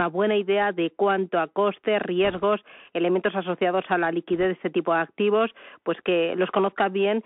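A speech clip carried over a Bluetooth CVSD headset codec throughout: the band stops near 3.4 kHz, sibilants turn scratchy, and a granular hiss sits under the voice. Bit errors on a Bluetooth voice link add a rushing crackle from 2.25 to 2.43 s, between "de cuánto a costes" and "elementos asociados a la". A briefer burst comes at 4.43 s before "de este tipo de". The first burst is consistent with roughly one and a half percent of bits flipped and the second with under one percent, with no loud clicks because each CVSD bit carries little weight.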